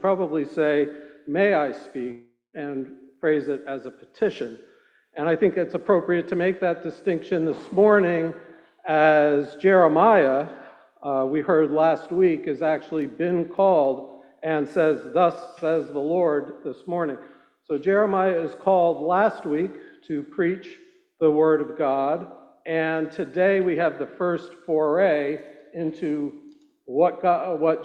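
The audio has two faults. From 2.11 to 2.56 s there's a long network dropout, most likely a stretch of packets that never arrived. The receiver stretches the last sound into a fading buzz, then about 170 ms of silence, and playback resumes with roughly 420 ms of material gone. Later, between 13.02 and 14.13 s, you get CD scratch ticks: five short clicks, each under a millisecond, repeating about four or five times a second, once per disc revolution, where a blemish wiped out more data than error correction could rebuild.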